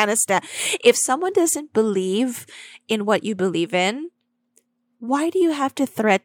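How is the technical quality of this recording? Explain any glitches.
No glitches turn up anywhere in this speech recording, so there's nothing here to explain.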